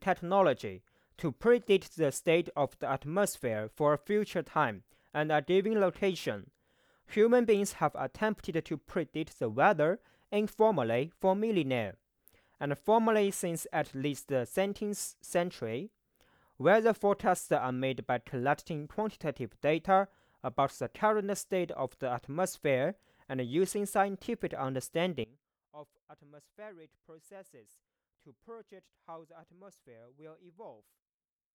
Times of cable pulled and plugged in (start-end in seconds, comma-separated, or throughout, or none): none